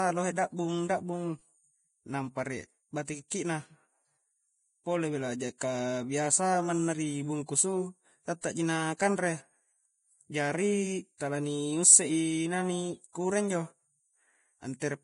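Throughout, the speech is hissy and grainy, with nothing above 10.5 kHz, likely heavy Vorbis compression at a low bitrate turning treble detail into noise. Pre-echo at 3.30 s: a 12 ms hiss precedes an attack, because quantisation noise spread across the codec block fills the quiet moment before it.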